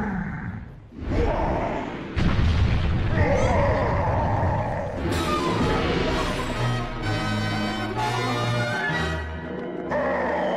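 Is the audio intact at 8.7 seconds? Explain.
Yes, at 8.7 s the audio runs cleanly, with no dropout, click, distortion or other fault at that moment.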